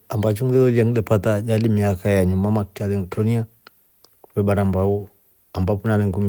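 No technical faults can be heard anywhere in the speech.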